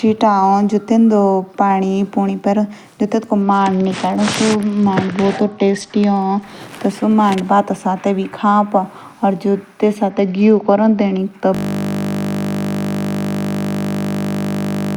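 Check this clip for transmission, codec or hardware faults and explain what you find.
Two faults are audible in this speech. A Bluetooth SBC bit pool drop occurs at 3.42–6.42 s and again at 10.10–11.18 s. The link throttled the codec, which fits a fall from bit pool 28 to 10. Treble goes dull and gritty noise rises. A system hang loop begins at 11.55 s and lasts to the end. The hardware replayed one 20 ms buffer, giving a steady 50 Hz buzz.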